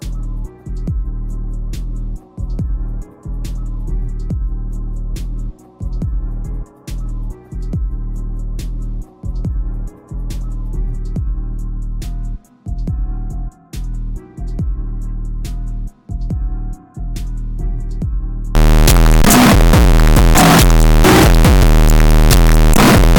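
From 18.55 s to the end at 23.19 s, the sound turns abruptly into a very loud, harsh, buzzing blast. The waveform flattens into a near-square shape sitting at an almost fixed, high level, and quiet background noise comes up as loud as the main sound, although the pitch can still be followed. This is the signature of float read as integer: 32-bit floating-point samples were likely interpreted as 32-bit integers, so each sample's sign and exponent bits dictate its level.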